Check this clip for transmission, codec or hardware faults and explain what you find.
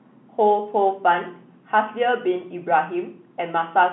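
Nothing stood out on listening; the speech comes through with the narrow bandwidth of an ordinary telephone line.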